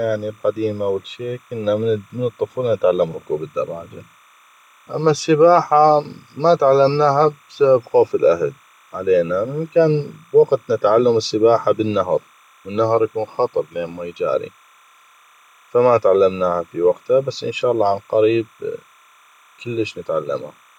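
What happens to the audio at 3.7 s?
At 3.7 s there's timecode bleed, running through the whole clip: linear timecode leaking in, a faint chirping warble near 1 and 2 kHz sitting well under the speech, which fits 29.97 fps code.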